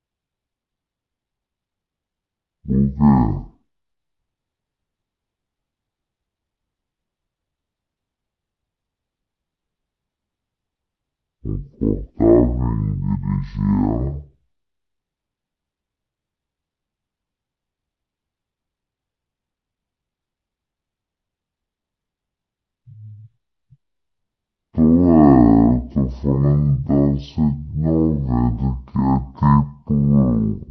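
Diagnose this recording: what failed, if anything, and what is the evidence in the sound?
The speech is a case of stereo read as mono, and it happens at the sample-format stage. For the whole clip everything runs at half speed and sits a full octave low, 12 semitones down, so it drags and sounds deep and woozy. Above that there's a fainter mirrored copy of the sound up in the top half of the spectrum. The left and right samples were interleaved, but they got read one after another as a single channel.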